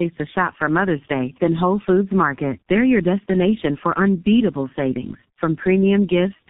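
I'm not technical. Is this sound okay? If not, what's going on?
No. Throughout, the speech has tandem speech coding: it passed through two different phone-network compressors in turn, the second reworking the first's damage. Unlike one poor phone link, it sounds rougher, muffled and warbly, and nothing above about 3.8 kHz remains.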